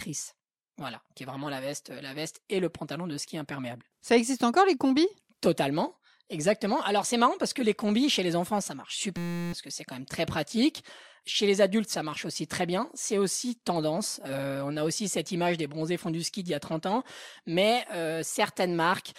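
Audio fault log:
9.17–9.53 s, system hang loop: Between "les enfants ça marche" and "que c'est quand même", the same 5.8 ms scrap of audio repeats about 60 times while the system stalls. The hardware keeps replaying one buffer, which fits a 256-sample buffer, so the sound becomes a steady 172 Hz buzz, and about 0.4 s of real audio is lost. The waveform shows one identical cycle tiled end to end. The spectrogram shows flat horizontal lines at multiples of 172 Hz.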